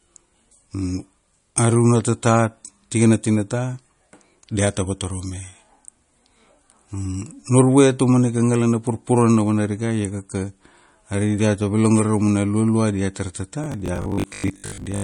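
MP3 compression damage runs through the whole speech clip: the sound is watery and swirly. This is likely MP3 encoding at a low bitrate, around 40 kbps, where weak frequency lines drop in and out from frame to frame. Robotic sound from repeated short buffers follows from 13.64 to 15.04 s, right after "raumana lualua diatar tata". The speech turns into a rigid 50 Hz metallic buzz, which fits a 20 ms chunk being replayed to cover late audio. About half of the real sound is skipped while the buzz still roughly tracks the syllables.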